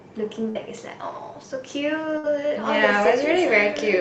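At 0.49 s and again at 2.18 s the speech briefly turns into a held continuation of the last sound that fades before the voice jumps ahead. The first lasts until about 0.63 s and the second until about 2.27 s. Each is a burst of packet loss: roughly 60 ms of audio never arrived, and the receiver stretched the last sound it had into an artificial fill of about 56 and 59 ms respectively before resuming further on.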